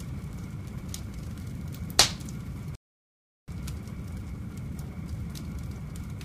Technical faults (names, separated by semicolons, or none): rebuffering stall